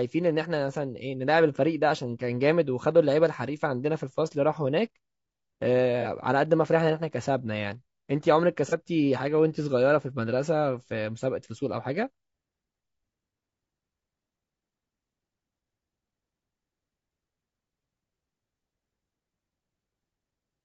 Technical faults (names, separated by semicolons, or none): low-delay AAC compression; AAC frame loss with concealment